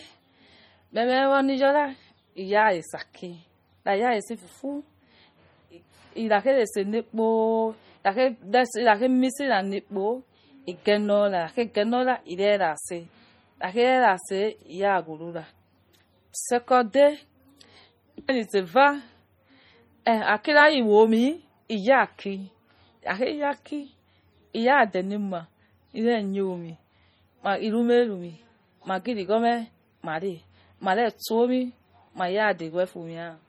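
Likely MP3 compression throughout, at a low bitrate that fits around 32 kbps, starving the encoder so weak frequency lines drop in and out between frames. The speech sounds heavily watery and swirly, with metallic chirping on s sounds and smeared consonant attacks.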